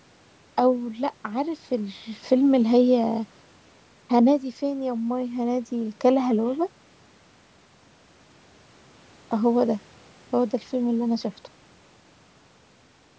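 No technical faults can be heard in this speech, which has passed through ordinary call microphone processing.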